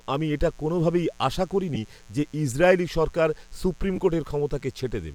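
Mains buzz runs through the whole of this speech clip as a steady, raspy hum built on 60 Hz. Sharp switching spikes, twice per mains cycle, leak in from something like a dimmer, rectifier or unshielded cable, so harmonics stack up into the kilohertz range. The buzz sits roughly 30 dB below the speech and stays present under every pause. Lost LE Audio frames cause two brief dropouts. The first runs from 1.75 to 1.78 s, right after "আমি এটা কোনওভাবেই আশা" and before "যে ইসরায়েলি সরকার সুপ্রিম", with a gap of about 10 ms, which fits a single lost frame. The second runs from 3.96 to 3.99 s, just after "যে ইসরায়েলি সরকার সুপ্রিম", and is about 20 ms long, consistent with two consecutive frames going missing. In each, the LC3 decoder fills the hole by repeating the last spectrum with scrambled signs, so the sound briefly turns into a noisy smear.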